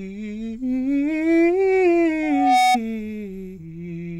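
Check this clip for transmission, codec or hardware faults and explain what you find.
One fault appears in this music clip: loudspeaker feedback squeal from 2.22 to 2.78 s. A microphone re-amplifies its own loudspeaker, and at 744 Hz the loop gain exceeds one. That single tone swells over under half a second to a few dB above the music. The self-building rise distinguishes it from a steady interference whistle.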